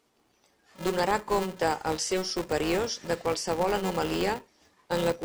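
A filter restarted on every block affects this speech throughout, leaving a 375 Hz buzz that tracks the level, which fits 128-sample blocks each starting from silence.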